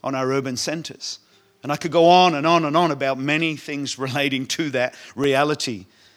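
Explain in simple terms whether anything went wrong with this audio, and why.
A block of digital silence occurs twice, at 0.59 s (about 1.3 ms long) and at 5.24 s (about 2.7 ms long). The audio drops abruptly to nothing and returns. Gaps this brief register as tiny ticks or dips, not pauses. Such blocks come from the software failing to fill its output in time, or from a calculation producing invalid numbers.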